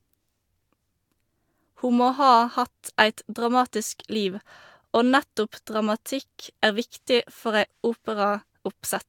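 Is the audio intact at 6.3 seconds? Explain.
Yes, the speech at 6.3 seconds is intact, with no dropout, glitch or other fault at that moment.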